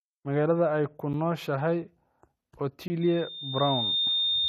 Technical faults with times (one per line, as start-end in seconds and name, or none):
1.13 block of digital silence
2.88-2.90 block of digital silence
3.01-4.48 loudspeaker feedback squeal